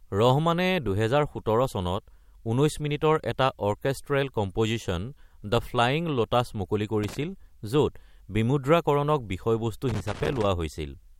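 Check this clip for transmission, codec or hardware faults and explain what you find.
A hardware fault shows up twice: loose connector crackle at 7.04 to 7.22 s and again at 9.89 to 10.46 s. A worn or dirty contact is intermittently losing connection, chopping the speech signal on and off, with any DC on the line adding pops, heard as irregular bursts of scratchy crackle.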